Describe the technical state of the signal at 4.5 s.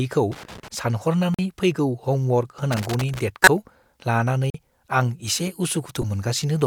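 At 4.50 s the output buffer likely went unfilled in time, leaving a block of digital silence that lasts until 4.54 s. The 43 ms gap fits a 2048-sample buffer. The speech drops abruptly to nothing and returns.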